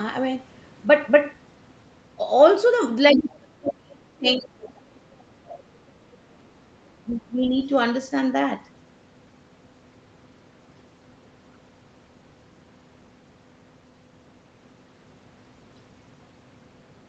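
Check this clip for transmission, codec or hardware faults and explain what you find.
Two kinds of fault are audible, both in the first half of the clip and overlapping each other. The sound is band-limited to 8 kHz throughout, which points to Opus at around 32 kbps on the call path.

Speech suppressed in double talk, from 3.13 to 6.64 s and again from 6.91 to 7.54 s: the talker's level repeatedly sinks, at its deepest by around 35 dB in the first stretch and around 20 dB in the second, for roughly three and a half seconds in all. The likely cause is the echo canceller meeting simultaneous talk from both ends, failing to separate local speech from loudspeaker echo, and ducking everything. Unlike a codec dropout, the dips follow the other side's activity rather than landing as isolated gaps.

The other side's voice is leaking through in three short bursts: 3.14 to 3.25 s, nearly as loud as the talker; 5.53 to 5.60 s, about 20 dB down; and 7.60 to 7.64 s, about 40 dB down. 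This is likely residual echo that the canceller left in the microphone signal after the far end played through a loudspeaker. It differs from crosstalk or a mixing error in that it arrives as short scraps of a second voice, tied to the suppression episodes.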